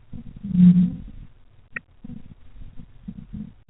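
From 0 to 1.41 s the speech sinks by up to around 40 dB, most likely speech suppressed in double talk: the echo canceller, facing both talkers, turned everything down. Unlike a plain dropout, the level dips and returns.

Between 1.75 and 1.8 s a brief, very faint scrap of the other side's voice leaking through appears, far below the speech. It is likely echo the canceller missed, distinct from background noise because it has speech-like texture.

From 1.92 s to the end the speech is again pushed down by up to around 40 dB, likely the same double-talk suppression. Throughout, the call path's G.711 coding limits the sound to below 4 kHz.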